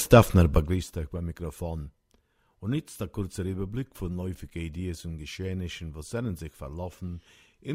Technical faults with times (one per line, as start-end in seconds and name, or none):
none